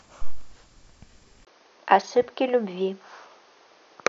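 At 1.45 s the speech drops out for 20 ms and then returns duller and about 5 dB quieter, with nothing above 6.5 kHz and a new, faint noise floor. This likely reflects the input switching to a poorer device, which holds until the end.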